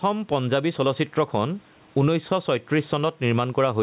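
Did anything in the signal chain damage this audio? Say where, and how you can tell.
Yes. Gain pumping runs through the whole clip. The gain swings by around 10 dB. The level sounds squashed. The likely cause is input gain set far too high, with a fast limiter pulling it down.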